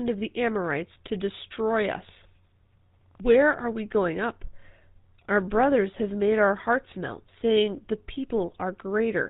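GSM full-rate codec damage runs through the whole of this speech clip, from the first moment to the last. The coder builds the voice from a vocal-tract filter excited by evenly spaced pulses, keeping only a fraction of the excitation detail. That produces the buzzy, gravelly roughness heard plainly here, and nothing is carried above 4 kHz, so the top end is missing. The harshness fits a bitrate near 13 kbps.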